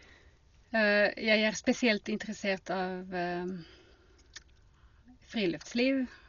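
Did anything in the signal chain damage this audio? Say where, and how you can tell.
Yes, at the codec stage: the speech sounds dull throughout, nothing above about 7.1 kHz, with rough fluttering noise, likely Dolby Digital compression at a starved bitrate, perhaps around 40 kbps.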